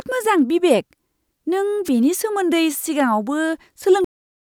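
A brief burst of static swishes across the speech from 1.85 to 1.90 s, a wireless microphone noise hit as the FM signal faded and receiver noise rose. At 4.05 s the audio stops dead mid-sound into digital silence with no decay, a cut-off end where the final buffers were never written.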